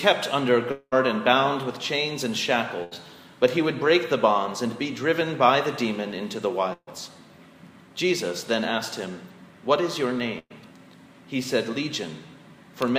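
From 0.71 to 0.94 s the sound is stretched into a fading buzz or hiss for about 200 ms and then falls silent, likely a long network dropout, with roughly 200 ms lost. Bursts of packet loss follow at 2.84–2.93 s, 6.73–6.89 s and 10.39–10.52 s. Each is a briefer held buzz or hiss covering 80, 140 and 120 ms of missing audio before resuming.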